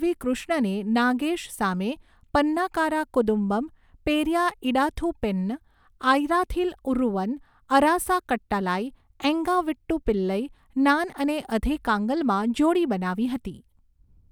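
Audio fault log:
No fault is heard anywhere in this speech.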